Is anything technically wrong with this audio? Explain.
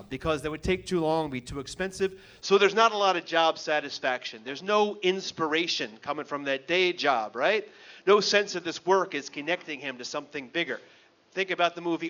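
Yes. At 2.42 s the sound turns dull and boxy until the end. Nothing above 6.8 kHz remains. The likely cause is an input switched to a poorer device, which passes a narrower band. The switch is seamless, at similar level. A faint new background noise appears.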